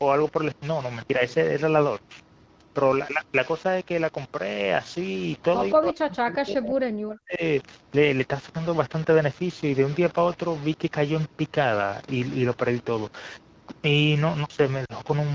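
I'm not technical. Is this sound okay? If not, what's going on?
No. Three things went wrong.

The recording was likely stored with too few levels of loudness, about six bits' worth, and rounded without dither. This is called low bit depth without dither. Throughout the clip the sound has a grainy, gritty roughness that follows it, strongest on quiet parts.

From 5.73 to 7.42 s, the call's echo canceller likely heard both sides talking at once and turned this talker down. This is speech suppressed in double talk. For about a second and a half the speech fades sharply or drops away in pieces.

At 14.85 to 14.92 s, the phone network lost AMR speech frames, roughly 40 ms of audio, which fits two missing frames. The decoder filled the gap by stretching out the last good sound, so the voice fades to near silence before it comes back.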